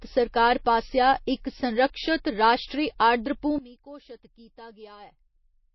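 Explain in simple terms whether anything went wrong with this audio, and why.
MP3 compression, heard throughout the clip: the speech has a plainly audible watery, swirly quality, and nothing comes through above about 5.8 kHz. This is likely from heavy compression, which cuts off the treble and discards quiet details to save space.

One channel inverted, from 3.58 s to the end: the speech suddenly drops to a much quieter remnant. This is likely from a stereo recording where one side was flipped upside down, so the sound shared by both sides cancelled when they were mixed into one.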